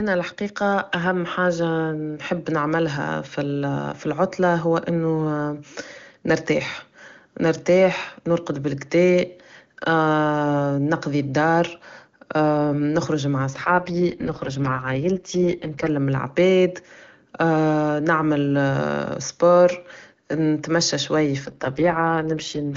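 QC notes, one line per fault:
13.53 to 15.89 s and 21.43 to 22.76 s, AMR rate drop: Right after "نخرج مع" and again after "سبور نتمى شويا", the speech turns rough, buzzy and synthetic. The band stays the same and nothing drops out. The sound fits the network pushing the AMR-WB codec down from its clean top rate, near 23.85 kbit/s, to the lowest, 6.6 kbit/s. At that rate the vocal tract model has too few bits for detail. The second drop runs to the end of the clip.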